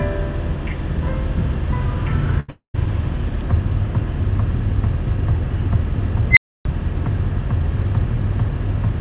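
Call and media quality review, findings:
Burst of packet loss, 2.40 to 2.50 s: about 80 ms of held, fading everyday sound, then about 80 ms of the sound missing. Jitter buffer concealment extends the last frame. Spectrogram shows a smeared, decaying band. Waveform shows a tapering envelope.

Long network dropout, 2.50 to 2.76 s, likely network-side: roughly 240 ms of sound lost. Concealment fades out, leaving about 120 ms of flat silence. Spectrogram shows a blank column. Waveform shows a flat line before the sound resumes.

Unstable filter, 6.31 to 6.65 s: a squeal near 2 kHz swells to clipping within about 60 ms, then cuts to about 285 ms of silence while the filter resets. Spectrogram shows a bright horizontal line. Waveform shows a rising envelope that hits the rails, then silence.

G.711 mu-law call path: the spectrogram shows nothing above 4 kHz, which fits a 64 kbps narrowband link.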